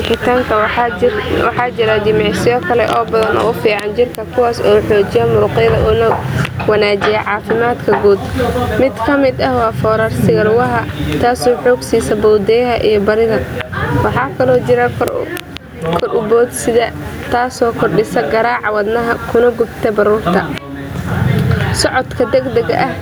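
Throughout the speech, the gain swings by roughly 15 dB, leaving the level squashed. This is gain pumping, likely from input gain set far too high with a fast limiter pulling it down on every peak. The room noise sits about 39 dB below the speech.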